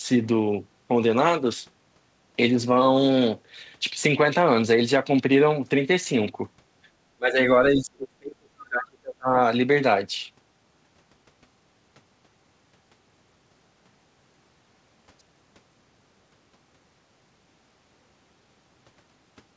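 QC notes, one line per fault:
7.16–7.39 s and 7.73–9.37 s, speech suppressed in double talk: the talker's level sinks by about 30 dB in the first stretch and about 35 dB in the second. The speech breaks up for roughly a fifth of a second and then for about one and a half seconds. The likely cause is an echo canceller mistaking overlapping talk from both ends for echo and turning everything down. The waveform envelope collapses toward silence there, and the spectrogram shows the speech harmonics fading out in patches below the 8 kHz ceiling of the G.722 call path.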